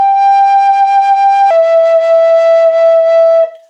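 From the start to 1.51 s, the music was likely played against the wrong clock, running 1.2 times faster than it was recorded. This section at the wrong speed sounds hurried and about three semitones sharp until normal speed and pitch return.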